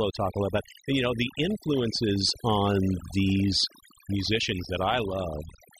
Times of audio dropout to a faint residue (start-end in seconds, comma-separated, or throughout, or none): none